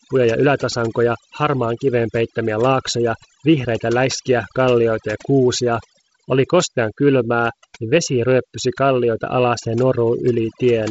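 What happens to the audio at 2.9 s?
At 2.9 s, as across the whole clip, overdone noise removal is at work: bands near the estimated noise floor are gated away, leaving near-silent gaps with twinkling specks. A spectrogram shows patchy holes and isolated bright dots between harmonics.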